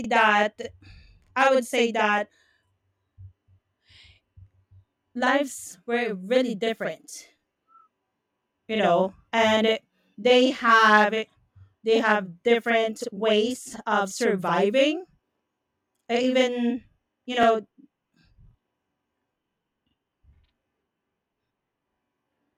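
Throughout the speech, every syllable is doubled by a slap echo 42.67 ms behind it: channel delay (doubling), one channel late by what fits a 2048-sample buffer, summed to mono. Brief stutters at 2.37–2.39 s (after "i would say that"), 7.39–7.41 s, 12.41–12.43 s (before "different ways of surviving") and 17.43–17.45 s (after "uh even you") come from overlapping chunks: 5 s chunks each replay 20 ms at the join.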